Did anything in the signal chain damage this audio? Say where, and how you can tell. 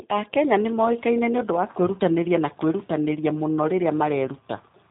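Yes. The G.729 codec stage left plainly audible damage across the whole speech clip, from start to finish. The band stops dead at 3.8 kHz, and the speech has the slightly rough, synthetic quality of a frame-based voice codec, which fits an 8 kbit/s G.729A link. The codec does not transmit the waveform. It sends a vocal-tract filter, a pitch predictor and a few pulses per 10 ms frame, then resynthesises speech from those parameters.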